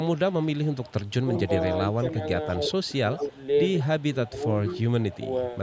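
Speech with an echo leak from 0.16 to 1.97 s and again from 2.71 to 5.3 s. A faint copy of the voice trails it by 176 ms, about 25 dB below the speech at first and about 20 dB below later. This is likely leftover loudspeaker pickup that the other side's echo canceller failed to remove. On a spectrogram it appears as a weak duplicate of each harmonic stack shifted slightly to the right.

Speech suppressed in double talk occurs at 1.48 to 2.06 s, 2.9 to 3.39 s, 4.13 to 4.44 s and 5.11 to 5.31 s. Here the voice dips in short pieces, by roughly 10 dB, and deeper, around 15 dB, near 3 s. The waveform envelope shows brief notches. This is likely the canceller turning down its own talker along with the loudspeaker echo while both sides spoke at once.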